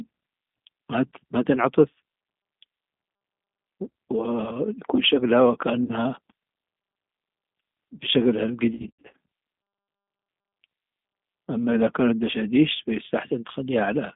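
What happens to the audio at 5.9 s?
VoIP packet loss concealed by the speech codec hits from 5.84 to 5.93 s. About 50 ms of audio went missing, which fits five lost 10 ms frames, and the decoder filled the gap by extending its last pitch and vocal tract filter at falling gain. The speech smears into a brief buzzy tone or coloured noise that fades, and because each frame builds on the one before, it stays weak or distorted after the stream resumes.

This moment also carries the G.729 codec damage heard through the whole speech clip. At 8 kbit/s, this G.729A coding rebuilds the voice from a filter, a pitch predictor and a few pulses per frame inside a 150 Hz to 3.6 kHz band, giving a plainly audible rough, synthetic, band-limited quality.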